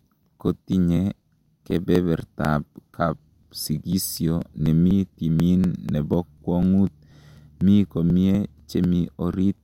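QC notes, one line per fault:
0.23–9.58 s, periodic USB or driver dropouts: something on the system stalls the USB bus or audio driver every 0.246 s, about four times a second, and roughly 4 ms of speech is skipped outright each time rather than filled with silence. The waveform jumps across each gap, so the speech carries about forty evenly spaced ticks that disappear wherever the signal drops away.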